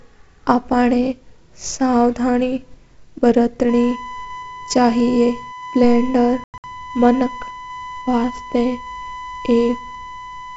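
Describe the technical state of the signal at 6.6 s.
At 6.6 s the signal is near the end of packet loss on an ADPCM call spanning 6.44 to 6.64 s. About 160 ms of audio drops out over 200 ms, with gaps of up to 100 ms. The holes are hard-edged silences rather than smoothed concealment. Several packets went missing, and the decoder's predictor and step size drift from the sender's, so the speech comes back slightly distorted.

A USB whine also runs underneath, from 3.69 s to the end. It is a fixed 1 kHz tone at about -15 dB relative to the signal, leaking in from the bus's 1 ms frames. That pitch sets it apart from mains hum at 50 or 60 Hz.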